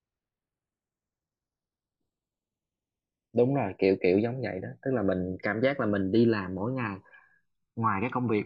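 A slow, sweeping flange runs through the speech from start to finish, with a hollow, whooshing colour gliding gradually across the spectrum. This is channels drifting apart. The left and right sides were captured on devices running from separate clocks, roughly 100 parts per million apart, so the offset between them keeps growing, reaching around a millisecond by the end. Summed together, the resulting comb notches creep steadily through the frequency range.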